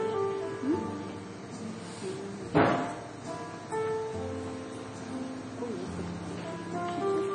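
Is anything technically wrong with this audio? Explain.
Yes. Throughout, heavy MP3 compression likely causes a hard treble cut at 9.9 kHz and watery, swirling artefacts as weak frequency lines flicker. That flicker, which fits roughly 32 kbps, separates it from a plain low-pass filter.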